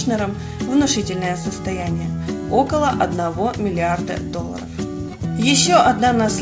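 No technical faults are audible.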